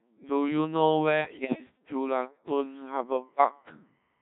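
Codec 2 vocoder coding runs through the whole recording. Instead of keeping the waveform, the codec sends only pitch, voicing, energy and a coarse spectral envelope, and the decoder rebuilds the speech from sine waves. The damage is heavy: the voice comes out robotic and buzzy, with a hollow, synthetic quality, and the sound fits a low mode of roughly 1.3 kbit/s.

Bit errors on digital voice radio hit from 1.20 to 1.64 s. At such a low rate, every bit controls the pitch, level, voicing or spectral shape of an entire frame, so a corrupted bit throws off a whole slice of sound. Through this stretch the synthetic voice lurches in pitch and loudness and changes tone colour abruptly, breaking into warbles, bleeps and gibberish. The length of the burst suggests about ten damaged frames, at an error rate of several percent.

Timecode bleed appears at 2.84 s and continues to the end. Linear timecode from an adjacent track or cable has leaked into the audio. 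It is a square wave that flips between two pitches, near 1 and 2 kHz. It sits far below the speech as a faint, steady chirping warble, and its rhythm fits 25-frame-per-second code.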